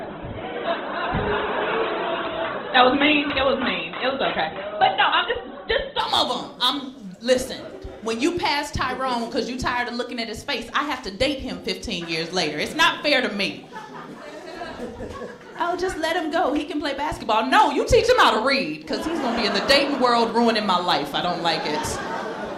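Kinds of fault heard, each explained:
Adaptive stream starting at a low bitrate: The player opened on a cheap stream version. Nothing sounds above about 4.1 kHz until 6.0 s, when quality jumps without a gap.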